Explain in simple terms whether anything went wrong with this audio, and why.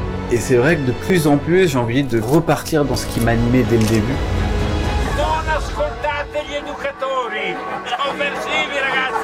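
Two brief skips interrupt the audio, at 1.1 s and 2.94 s, and at each one the sound jumps forward slightly, with about 20 ms missing. The likely cause is a dropped buffer (overrun): the recording software fell behind, and the hardware overwrote a small block of samples before they were saved. The audio on either side of the gap was then joined directly, with no silence in between, which produces the skip.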